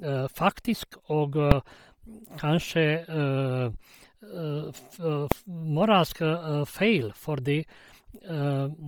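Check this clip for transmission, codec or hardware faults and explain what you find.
Two faults are present: codec damage across the whole speech clip, and two brief full-scale bangs.

Throughout, the speech has a breathy, grainy edge and a smeared upper band, where high frequencies sound replaced by hiss. This is likely Bluetooth LC3 compression, heavily damaged at a low bitrate, around 32 kbps with 10 ms frames. At that rate the encoder discards much of the upper spectrum and fills it with noise.

At 1.51 s and 5.32 s, invalid numbers at full scale produce single loud bangs. A calculation returned infinite or invalid values, which were clamped to maximum amplitude. The first lasts about 2.7 ms, which fits a 128-sample block. The second is shorter, about 0.7 ms.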